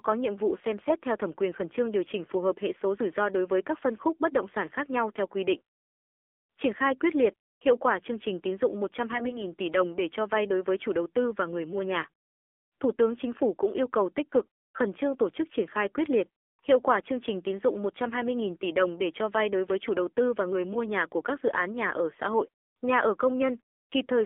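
AMR narrowband mobile codec, throughout the clip: the speech has passed through the 2G/3G mobile speech coder, which samples at 8 kHz and rebuilds the voice from a vocal-tract model excited by a few pulses per 5 ms subframe. The audible band runs only from about 300 Hz to 3.5 kHz, so everything above is gone. The coding damage is plainly audible, with a buzzy, synthetic edge that fits one of the lower modes, around 7.4 kbps.

AMR bit errors, from 9.14 to 9.45 s, between "chương trình tín dụng" and "tỷ đồng để cho": for about a third of a second the voice turns hoarse, scratchy and gargly while keeping roughly its pitch and loudness. Over a weak link, the less protected bits of the coded frames arrived flipped. The checksum on the critical bits still passed, so the decoder used wrong pulse positions and slightly wrong gain and spectral values. The error rate was a few percent, and ten 20 ms frames within the span were hit.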